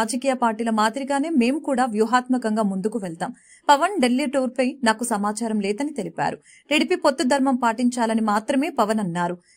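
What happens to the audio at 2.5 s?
Nothing goes wrong at 2.5 s; the audio runs through that moment intact, with no dropout, click, glitch or other fault.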